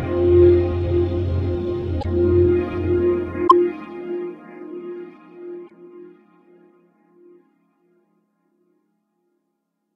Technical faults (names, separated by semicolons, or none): damaged data in a compressed stream